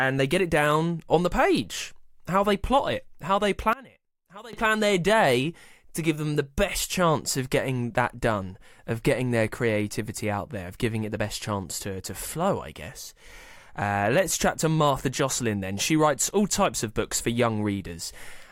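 From 3.73 to 4.53 s the speech drops by about 21 dB and turns faint. The likely cause is one channel inverted, which cancels the shared centre when summed to mono. The waveform shrinks abruptly there, and the spectrogram fades across all bands.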